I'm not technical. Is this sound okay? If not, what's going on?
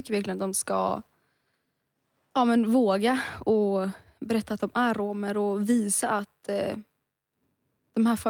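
Yes, this sound is fine.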